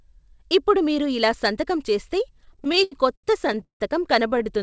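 After "మీరు ఇలా సంతకం చేస్తే", from 2.38 to 3.82 s, repeated stalls (stutter) set in. The jitter buffer kept running dry, so the receiver stretched the last sound through 19 gaps, the longest 166 ms, fading it on longer waits. A shorter burst of five tiny gaps follows at 4.28 to 4.47 s. On a spectrogram, already blank above 8 kHz from the call codec, these show as smeared, frozen horizontal streaks; the waveform shows repeated, decaying copies.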